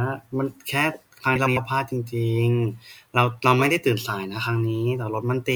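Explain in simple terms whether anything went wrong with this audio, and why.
Between 1.35 and 1.58 s the speech briefly garbles into a flutter. This is frames out of order: two adjoining chunks, each about 0.1 s, played in swapped order, so nothing is missing but the sequence is scrambled.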